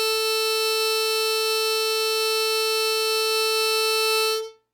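No technical fault can be heard anywhere in the music. Nothing in it points to a problem in how it was captured or played back.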